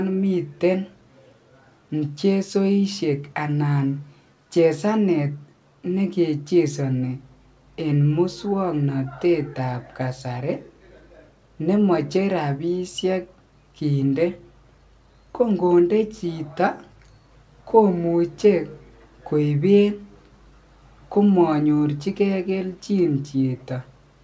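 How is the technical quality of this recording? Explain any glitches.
The technical quality of this recording is good, with no glitches to explain, and the call codec's band limit leaves nothing above about 8 kHz, as expected.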